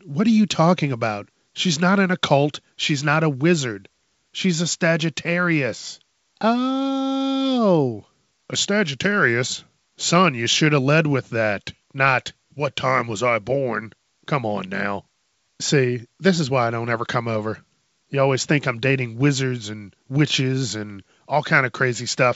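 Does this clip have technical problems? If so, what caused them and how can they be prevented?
No, the speech comes across intact on a G.722 wideband telephone path at 64 kbit/s, with audio extending up to about 7 kHz and at most a faint trace of the coding in the upper band.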